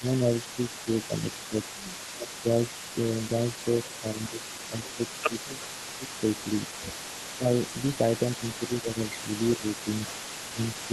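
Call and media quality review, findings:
Speech suppressed in double talk: near-end dips at 0.0–2.95 s, 4.01–7.47 s, 8.39–10.92 s, deepest about 15 dB (about 10 dB in the last span). Likely the echo canceller ducking during overlap. Waveform shows notched, chopped envelope.

Echo leak: delayed copy throughout, 376 ms behind, about 15 dB below speech. Likely residual loudspeaker pickup passed by the far-end canceller. Spectrogram shows faint duplicated harmonics offset by that delay.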